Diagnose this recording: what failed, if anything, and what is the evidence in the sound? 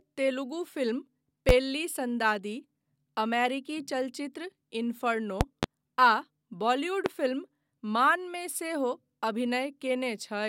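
Loud pops land at 1.49–1.52 s, 5.41–5.66 s (two in quick succession) and 7.06–7.09 s, each about 20 dB above the speech, which keeps going underneath. That's likely the analogue wiring stage, with a voltage spike from a plug, switch or static getting added straight onto the signal.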